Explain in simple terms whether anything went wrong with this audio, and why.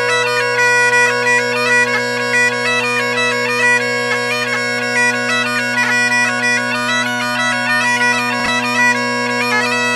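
Just after 8.4 seconds there is a brief scrambled moment, lasting until about 8.48 seconds, where the sound stumbles and jumps. This is chunks out of order. The audio is carried in slices of 20 milliseconds, and one slice arrived three slices late, so it played after pieces that should have come after it. Nothing is missing, but the shuffled order leaves three hard joins.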